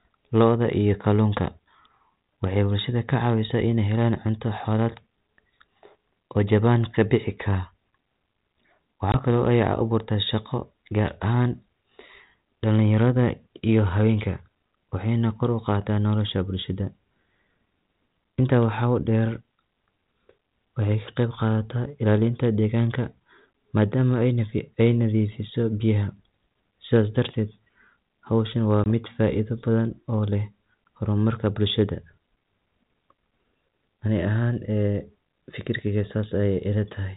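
At 9.12 to 9.15 s and again at 28.84 to 28.87 s, between "howshan waa" and "mid faaido badhan oo", there is packet loss on an ADPCM call. About one packet, some 20 ms of audio, goes missing each time and is replaced by silence, leaving a hard-edged gap. The decoder's adaptive predictor and step size drift away from the sender's, so speech resumes with brief, slight distortion before settling. The light, band-limited coding sound fits 32 kbit/s G.726.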